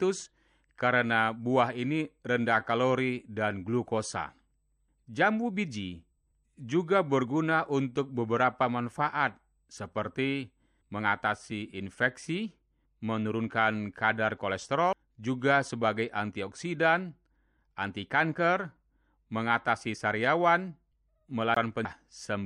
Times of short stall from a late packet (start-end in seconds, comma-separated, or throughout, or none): none